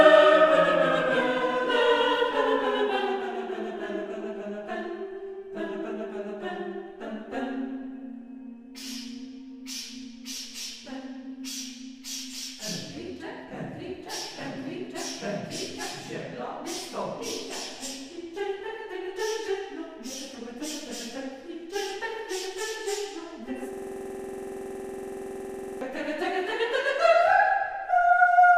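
A system hang loop runs from 23.73 to 25.81 s. The machine or its audio driver stalled while the playback hardware kept reading the same ring buffer, so one 46.44 ms slice of sound repeats exactly, about 45 times in a row. That slice length fits a 2048-sample buffer. Repeating at 21.5 Hz, the loop is a rapid, rigid stutter at the edge of a coarse buzz, frozen on identical material until playback recovers.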